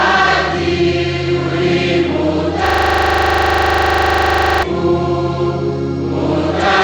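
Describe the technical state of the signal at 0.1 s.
At 0.1 s the signal is intact, with no technical fault audible at that moment.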